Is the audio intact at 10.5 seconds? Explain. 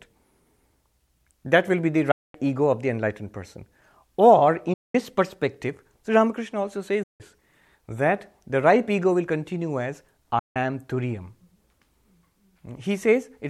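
No. Packets likely failed to reach the headphones in time and were discarded, a Bluetooth dropout. From 10.39 to 10.56 s the speech cuts to silence for about 162.5 ms, consistent with around eight lost packets, then resumes further along as though it had played on.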